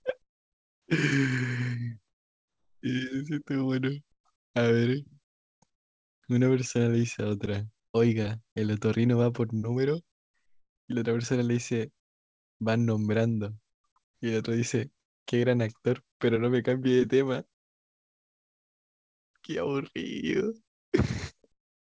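Speech with pauses at 0.22–0.88 s, 4.36–4.54 s, 5.24–5.62 s and 14.04–14.22 s where the background drops to steady, featureless hiss, about 13 to 32 dB quieter: comfort noise in place of the background, likely from discontinuous transmission.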